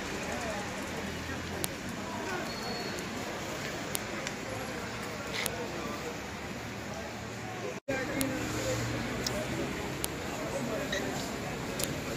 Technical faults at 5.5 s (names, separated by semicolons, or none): file header played as audio